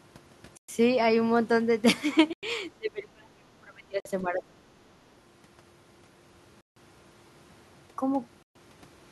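A Bluetooth stall, most likely from radio interference holding back packets until the headphones' buffer ran empty, cuts the speech to silence at 0.57 to 0.69 s (113 ms) and again at 2.33 to 2.43 s (98 ms). Playback freezes and then resumes where it paused once the resent packets arrive, so each gap is a clean dropout rather than a fade.

From 2.77 to 4.61 s, an echo canceller, likely confused by both sides talking at once, could not tell the near talker from loudspeaker echo and turned the speech down along with it. This is speech suppressed in double talk. The voice sinks, at worst by around 30 dB, for about a second and a half in total. Inside this stretch, another stall adds a 50 ms silence at 4.00 to 4.05 s.

The same stall pattern returns at 6.61 to 6.76 s, the longest gap at 155 ms, and at 8.43 to 8.55 s (126 ms). Each is a short, hard silence before the audio picks up again.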